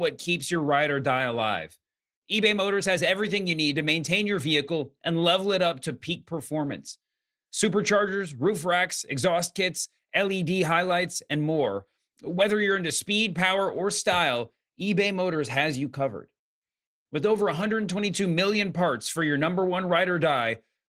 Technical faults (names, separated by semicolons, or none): none